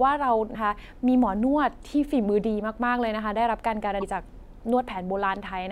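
A brief glitch breaks into the speech from 0.51 to 0.56 s, and another from 3.99 to 4.03 s. Both come from damaged data in a compressed stream: corrupted bytes make the decoder misread those frames and lose sync until it finds the next valid frame header.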